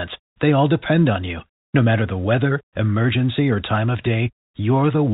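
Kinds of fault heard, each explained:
Nothing stood out on listening to this speech clip.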